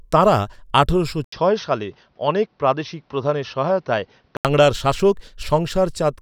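At 1.24 s the recording likely switched its input to a poorer device, with a brief gap of about 80 ms at the changeover. From there until 4.45 s the speech passes through a narrower channel with nothing above 6.3 kHz, so it sounds duller and boxier, with a faint new background noise well below the speech. Loudness stays roughly the same, and at 4.45 s the full, clearer tone returns.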